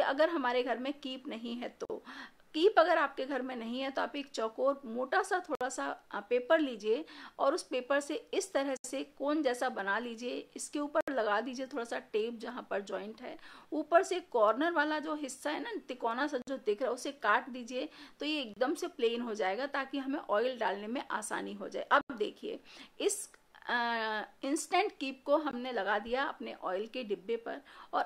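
The audio drops to brief silence eight times: at 1.85, 5.55, 8.77, 11.01, 16.42, 18.54, 22.01 and 25.51 s. Gaps run 19 to 86 ms. Each resumes abruptly. These are Bluetooth stalls, likely interference starving the headphones' buffer.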